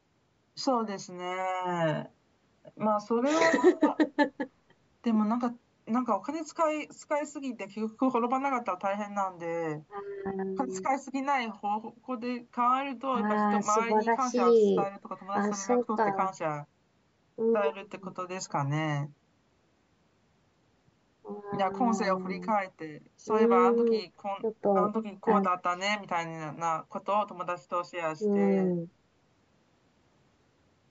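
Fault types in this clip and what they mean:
Nothing stood out on listening; the audio shows only the expected effect of call microphone processing, with just the lowest bass taken out by its high-pass filter.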